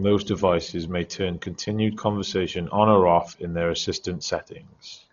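From start to finish the speech sounds dull and heavily damaged: nothing is present above 6.9 kHz, and a rough, fluttering noise clings to the voiced sounds. That points to Dolby Digital compression as the likely cause, at a rate that fits about 32 kbps. Starved frequency lines are refilled with dither noise rather than left silent, which sets it apart from the swirly, watery holes of MP3 and from a clean low-pass cut.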